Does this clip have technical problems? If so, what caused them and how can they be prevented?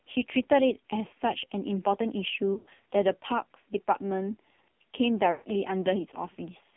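Yes. The whole clip passed through the AMR narrowband mobile codec. The band is only 150 Hz to 3.5 kHz. The speech sounds heavily buzzy and synthetic, which fits a low mode near 5.9 kbps. Use a wideband codec or a higher bitrate.

There are lost AMR speech frames from 2.54 to 2.84 s. About 200 ms drops out in runs up to 80 ms, and the decoder repeats the last settings and fades. Another loss from 5.32 to 5.45 s fades out the same way. Improve radio coverage or add error protection to prevent them.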